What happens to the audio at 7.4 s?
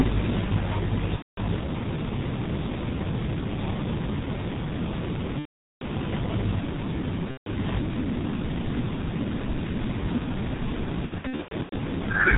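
At 7.4 s, VoIP packet loss concealed by the speech codec runs from 7.31 to 7.48 s: the decoder extrapolates its last pitch and filter into a fading buzzy tone or coloured noise, visible as a shrinking waveform envelope. Under it, the heavy G.723.1 codec damage at 6.3 kbit/s keeps everything muffled and hoarse, with nothing on the spectrogram above 4 kHz.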